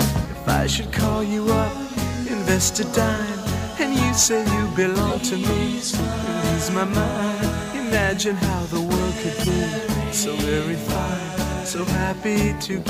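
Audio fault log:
5.02–5.17 s, corrupt frame decoded: a short, loud chirp peaking at about −10 dBFS, from roughly three damaged compressed frames played with misread gains and codes.
6.09–6.16 s, corrupt frame decoded: a briefer squeak peaking at about −15 dBFS, as a couple of corrupted frames spray energy into wrong frequencies.
9.37–9.50 s, corrupt frame decoded: a noisy burst peaking at about −10 dBFS, where around four frames with flipped bits were decoded anyway.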